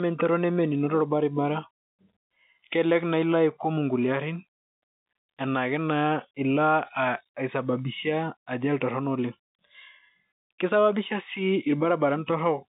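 Telephone-line speech, with no technical faults heard.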